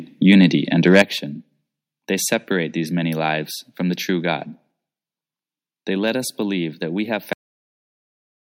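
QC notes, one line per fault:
0.42–0.44 s and 0.86–1.02 s, microphone overload: a brief harsh crackle, then a longer, gritty, flattened stretch on loud peaks, about 1 dB and then about 8 dB past the converter's limit. The input volume was likely set too high, so the converter sliced off waveform tops, a small fraction of samples at first and roughly one in twenty later.
1.02 s, microphone volume stepped down: right after the heavier distortion, voice and background fall together by about 8 dB in a single abrupt step rather than a smooth fade. This is likely the call software reacting to the clipping by cutting the device's input gain at once.
7.33 s, cut-off end: immediately after "believe that we have" the audio stops mid-sound and falls straight into digital silence, with no decay or room tail, for the rest of the clip. The final buffers were never written or played out, so the recording simply ends there.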